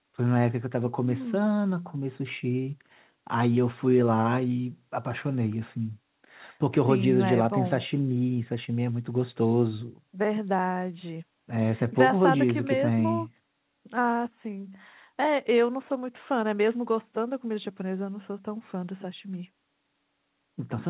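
The speech contains no audible technical faults.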